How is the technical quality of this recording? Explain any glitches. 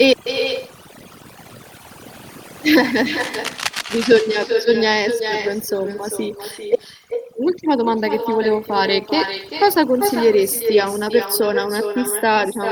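The quality is poor, with three separate faults.

Overdone noise removal runs throughout. Aggressive suppression removes bands near the noise floor, leaving twinkling specks, seen as scattered isolated dots across an otherwise blank spectrogram background.

Echo with no canceller is also present throughout. The far end's loudspeaker feeds back, so every phrase repeats roughly 400 ms later, about 7 dB quieter, showing as a duplicated waveform trailing each syllable.

Cable scratch noise occurs from 3.19 to 4.06 s, likely from a loose connector being disturbed. Dense, ragged bursts rasp over the speech, not far below its level, appearing as irregular broadband vertical streaks.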